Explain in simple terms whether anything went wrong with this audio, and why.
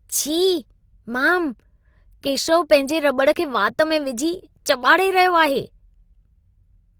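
Something did go wrong, and you can hear it through the whole clip. The speech has a rough, grainy texture, and the sound gets a bit noisy and fizzy. That points to Opus compression, likely squeezed hard in its music mode. When the encoder runs short of data it fills the gaps by copying lower parts of the sound upward or by padding them with noise. That keeps the full range, which reaches up near 20 kHz, but it leaves this gritty coating behind.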